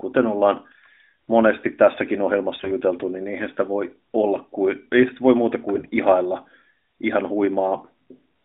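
In this narrowband speech clip the sound turns briefly hoarse and gargly twice, from 2.60 to 2.72 s just after "monesti tässäkin" and from 5.74 to 5.92 s after "ei sitä voi muuta". Pitch and level hold, but the texture goes scratchy. These are AMR bit errors: on a weak link a few percent of the less protected bits in each AMR frame flipped, misplacing excitation pulses and skewing fine gain and spectral values on a 200 Hz to 3.7 kHz line.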